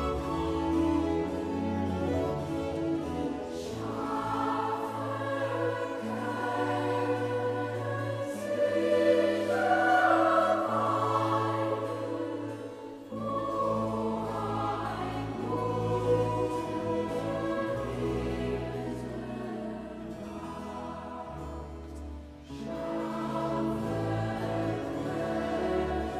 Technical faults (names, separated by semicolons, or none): none